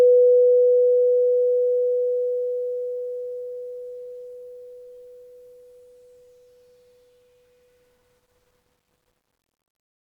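No technical faults can be heard in this music.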